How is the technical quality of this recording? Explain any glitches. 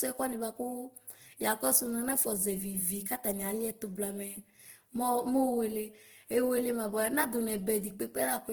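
The recording is audibly degraded by codec damage that runs through the whole clip, from start to finish.

Opus compression, likely at a low bitrate fitting about 16 kbps in its music (CELT) mode, is the culprit. With too few bits, the encoder preserves each band's overall energy but fills the missing detail by folding lower bands upward or substituting noise. Because the full bandwidth is kept, reaching roughly 20 kHz, the speech isn't muffled. Instead it sounds rough, grainy and noisy, with less of the hollow swirl of MP3.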